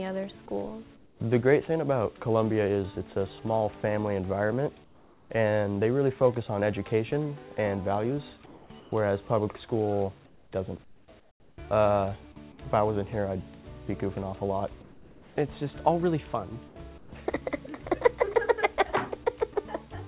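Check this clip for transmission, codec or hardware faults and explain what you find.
Two kinds of fault are audible: a single DC step and repeated stretches of comfort noise in place of the background. These come through a call path whose band stops at 4 kHz, which fits G.711 mu-law at 64 kbps.

At 0.67 s a DC step shifts the waveform's zero line at once. A high-pass around 5 Hz then pulls the offset back to zero. The result is one low thump while the sound carries on unchanged. A dropout or packet-loss click would interrupt or distort the signal itself. This step only displaces the baseline, so nothing is missing.

Comfort noise in place of the background fills the gaps at 0.96–1.2 s, 4.84–5.3 s, 8.46–8.92 s, 10.26–10.52 s, 10.84–11.58 s, 14.82–15.36 s and 16.68–17.12 s. The likely cause is the sender's voice detection halting transmission and the receiver synthesising shaped noise instead. 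In the gaps at 0.96 s, 4.84 s, 10.26 s and 14.82 s the real background, about 26 to 31 dB below the loud parts, gives way to a smooth, featureless noise about 3 to 7 dB quieter. Noise-gating would leave true silence, but here a smooth, steady noise remains.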